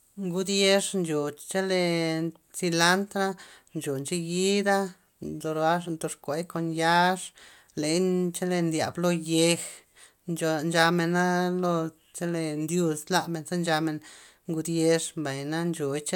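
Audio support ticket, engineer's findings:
No faults found in the speech recording. Nothing heard points to a problem in any component, so no action needed on this ticket.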